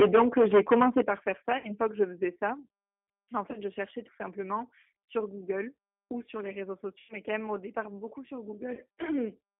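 The whole clip carries G.729 codec damage at 8 kbit/s. The line band runs from 250 Hz to 3.4 kHz, so the speech sounds thin, rough and synthetic throughout.

From 0 to 1.01 s there is microphone overload, likely from input gain set too high. Peaks run about 13 dB over the limit. About a fifth of samples are flattened, giving a harsh crackle.

At 1.02 s the level drops by about 10 dB. This is a microphone volume stepped down, likely by the call software reacting to the clipping. At 2.04 s the same thing happens again, a further step of about 3 dB, likely for the same reason.

From 1.58 s on there is also VoIP packet loss concealed by the speech codec. The decoder stretches its last frames into a fading buzzy tone or coloured noise, and the voice stays weak briefly afterwards. The gaps are:
1.58 to 1.72 s, 60 ms lost
3.51 to 3.57 s, 30 ms lost
5.06 to 5.08 s, 30 ms lost
7.00 to 7.14 s, 90 ms lost
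8.74 to 8.80 s, 30 ms lost

These fit one to three lost 30 ms packets each. A smooth fade-out closes the clip near 9.5 s.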